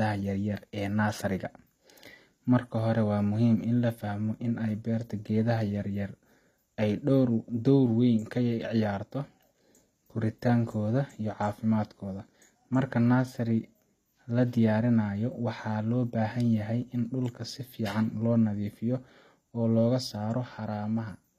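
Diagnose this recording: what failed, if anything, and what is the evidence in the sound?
HE-AAC compression, throughout the clip, at the codec stage. The treble of the speech sounds bright but synthetic: sibilants come out gritty and metallic, and nothing is present above about 14.9 kHz. That points to the high band being regenerated rather than transmitted, likely spectral band replication at a low rate, which fits roughly 24 kbps. Copied lower bands fill the top octave under a coarse envelope, so harmonics there don't line up with the coded band beneath.

Sudden gain jump, from 20.57 s to 21.11 s, just after "oo laga". Speech and background noise both drop by about 4 dB in a single step, then return at 21.11 s, with no fade on either edge. Because the noise floor moves with the speech, this is a digital level change rather than the talker getting quieter, likely a gain setting applied in call processing without any ramp.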